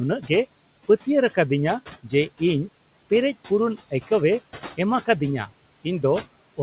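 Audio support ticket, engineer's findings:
Noise suppressor artifacts, throughout the clip. Background noise drops by about 16 dB in the gaps and comes back up under the speech, because the suppressor attenuates the steady-noise bands frame by frame. The room noise sits about 20 dB below the speech, and the band stops at 4 kHz, which fits a G.711 narrowband call path.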